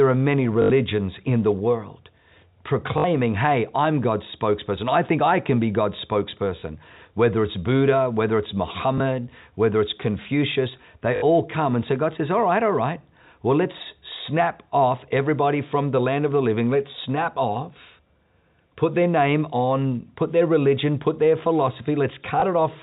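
Speech over a telephone-band G.711 link suffers packet loss with the last packet repeated at 0.62–0.70 s (after "are many"), 2.98–3.04 s (before "hey I'm"), 6.6 s, 8.98 s (between "whether it's" and "whether it's"), 11.16–11.22 s and 22.4 s. Each gap is filled by replaying audio, fitting 20 ms packets, and the multi-packet replays give a brief robotic stutter while the single repeats give a small blip.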